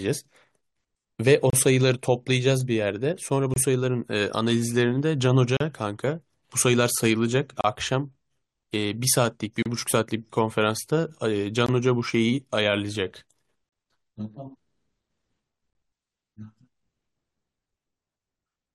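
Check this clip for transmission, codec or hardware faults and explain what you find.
The speech has a transmission fault: seven short dropouts to silence, evenly spaced through the first part of the clip.

Gap between stream segments, at 1.50, 3.54, 5.57, 7.61, 9.63, 11.66 and 13.69 s. The stream arrives in 2-second segments, and at each join the time stamps leave a small hole that the player fills with silence, adding 22 to 36 ms each time. Nothing is lost. The speech breaks off abruptly with hard edges and resumes, about every two seconds.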